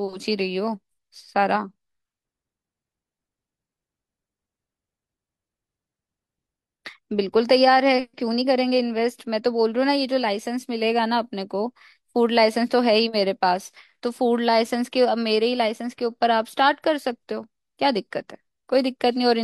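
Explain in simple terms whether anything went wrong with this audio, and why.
Nothing went wrong in this speech recording, because no technical fault can be heard anywhere in it. At no point is the sound disturbed by a problem in how it was recorded, stored or played back.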